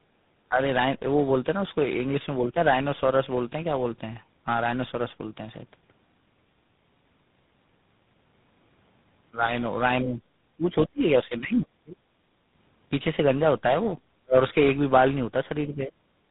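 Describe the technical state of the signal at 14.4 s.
Around 14.4 s the sound is just recovering from speech suppressed in double talk: from 14.23 to 14.36 s it plunges by about 35 dB, likely an echo canceller ducking during simultaneous talking. Throughout, tandem speech coding through three successive speech codecs ending in GSM full rate leaves a compounded warbly roughness beyond any single codec, with nothing above 3.8 kHz.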